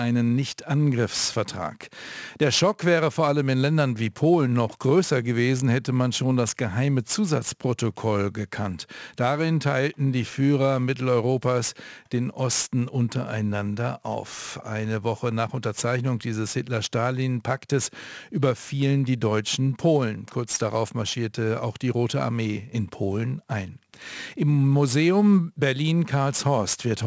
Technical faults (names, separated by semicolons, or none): aliasing